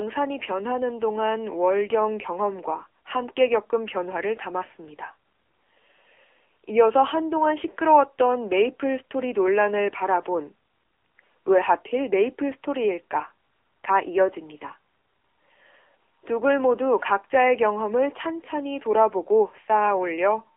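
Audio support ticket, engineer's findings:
AMR narrowband mobile codec, whole clip. Speech band-limited to about 300 Hz to 3.4 kHz, nothing above 3.7 kHz. Plainly buzzy, synthetic timbre from coarse vocal-tract modelling. Fits a low AMR-NB mode near 7.95 kbps. Component: mobile call path.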